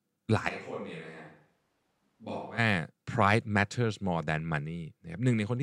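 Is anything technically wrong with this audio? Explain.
Yes. From 0.50 s to 2.57 s the voice abruptly turns roomy and hollow. It loses bass, drops by roughly 10 dB, and carries more background room noise, sitting around 35 dB below the speech. At 2.57 s it snaps back to the close, full sound. This is likely a switch to a distant microphone: the close mic's signal dropped out, so that stretch was captured by a mic farther away, which hears more room reflections and less direct sound.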